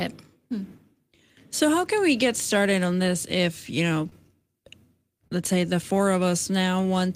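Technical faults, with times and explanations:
4.05–4.07 s, lost packet rebuilt from error correction: one packet never arrived, but the next one carried a reduced-bitrate duplicate of it, so the decoder played that backup in place of the missing 20 ms. Because the copy was encoded so cheaply, this short stretch of speech comes out coarser and noisier than the frames around it, and there is no audible gap at this point.
4.09–4.14 s and 5.28–5.32 s, short concealed packet loss: in each case about 20 ms of the stream failed to reach the decoder in time, and no backup copy was available. The receiver invented a stand-in of roughly 20 ms by extending the sound that came just before, then faded back into the real signal. At each spot this leaves a brief smeared or wobbly patch in the speech.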